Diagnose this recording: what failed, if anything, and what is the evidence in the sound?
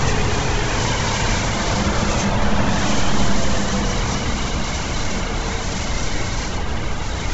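The fault sits at the codec stage, and it runs the whole clip. Nothing comes through above 7.7 kHz, and what's left up top has that grainy, breathy, noise-filled texture rather than real detail. That's heavy Bluetooth LC3 compression, likely over an LE Audio link. The sound points to a low bitrate, around 16 kbps with 10 ms frames. The encoder throws away most of the upper spectrum and fills the holes with synthetic noise.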